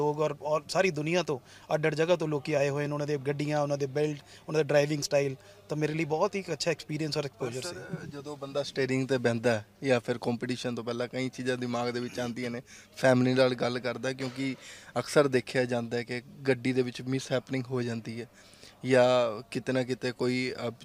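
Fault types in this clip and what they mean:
No fault types are present in this clip.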